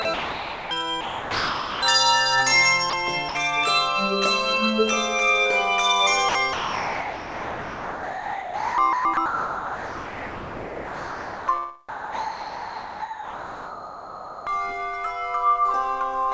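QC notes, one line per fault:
0.02–0.71 s: sound chopped by the voice detector. About 600 ms is swapped for comfort noise in bursts, so the sound stutters, likely from detector gating.
1.01–1.82 s: sound dropped by the voice detector. 810 ms gives way to steady comfort noise, likely because the detector misread quiet sound as background.
2.90–2.93 s and 3.29–3.35 s: sound dropped by the voice detector. Brief 30 ms and 60 ms holes filled with noise, likely from the detector briefly closing on low-level sound.
6.29–11.48 s: sound chopped by the voice detector. The detector likely toggles repeatedly; 4.68 s in total is replaced by comfort noise, giving sustained choppiness.
11.89–14.47 s: sound dropped by the voice detector. 2.58 s is replaced by steady comfort noise until sending resumes, likely because the detector held the stretch as background. The band stops at 8 kHz, consistent with G.722.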